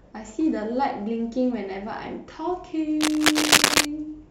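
From 3.01 to 3.85 s, cable scratch noise cuts across the speech. Dense, uneven bursts of scratching and rustling sit a little louder than the voice. The likely cause is a worn cable or connector being moved, its contact resistance changing rapidly.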